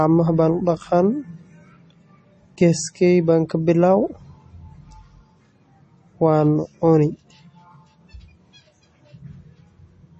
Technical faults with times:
0.00-10.20 MP3 compression

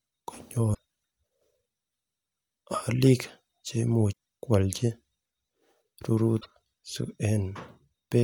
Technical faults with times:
0.71-0.78 damaged data in a compressed stream
4.09-4.13 damaged data in a compressed stream
6.37-6.46 damaged data in a compressed stream

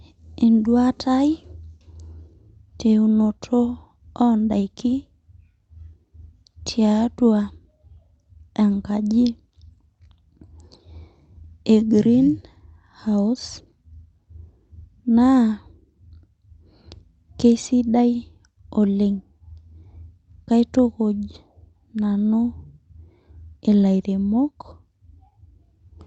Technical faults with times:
none

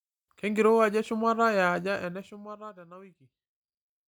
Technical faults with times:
1.76-3.00 zipper noise

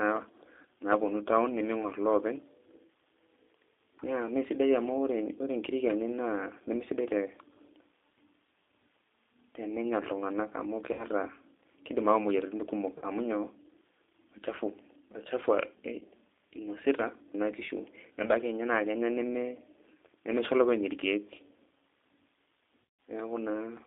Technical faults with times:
0.00-23.86 G.729 codec
10.93-11.05 VoIP packet loss concealed by the speech codec
12.98-13.05 VoIP packet loss concealed by the speech codec
15.99-16.04 VoIP packet loss concealed by the speech codec
22.83-22.99 VoIP packet loss concealed by the speech codec

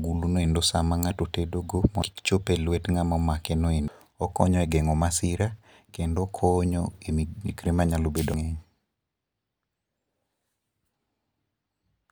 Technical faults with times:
2.02 compressed frames skipped
3.88 compressed frames skipped
8.34 compressed frames skipped

